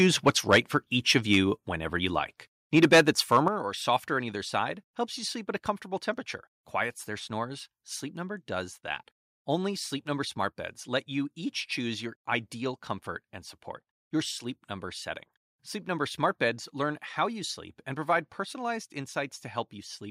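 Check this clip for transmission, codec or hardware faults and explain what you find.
Two hardware-side faults appear in the opening few seconds of this speech clip: microphone overload and the microphone volume being stepped down.

Microphone overload occurs from 0.0 to 0.58 s, 1.16 to 1.37 s and 2.76 to 3.37 s, with peaks pushed about 8, 4 and 5 dB past full scale. Input gain set too high likely drives the converter into its ceiling, slicing off waveform tops (roughly 2%, under half a percent, and 5% of samples). It sounds harsh and crackly. The waveform shows flat-topped peaks, and the spectrogram shows smeared high-frequency energy.

The microphone volume is stepped down twice: at 0.55 s, just before "for each", by about 2 dB, and at 3.48 s, just before "or softer on either", by about 7 dB. Each comes during or just after a clipped stretch, likely the call software cutting input gain in one jump. 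Voice and background drop together, visible as a sudden lower waveform envelope.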